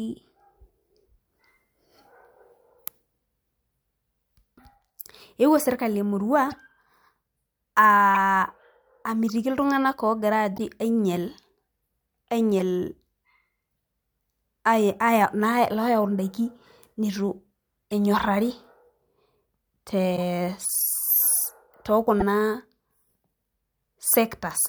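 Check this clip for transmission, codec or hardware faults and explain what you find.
The speech carries corrupt frame decoded errors, eight short glitches in all: 6.51–6.54 s, 8.14–8.17 s, 9.29 s, 10.56–10.59 s, 12.59–12.61 s, 17.91 s, 20.16–20.19 s and 22.20–22.22 s. Damaged bits in the compressed stream got decoded as if valid, so misread gains and codes scatter energy to the wrong frequencies for a frame or a few. You hear brief chirps or noise blips, loudest near 8.1 s and 22.2 s and quietest at 17.9 s.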